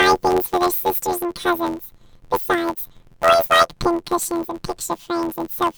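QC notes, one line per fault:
Throughout: planar audio read as interleaved, 11.61 ms blocks each replayed at double speed, giving a robotic buzz at 86.1 Hz, no clear octave shift.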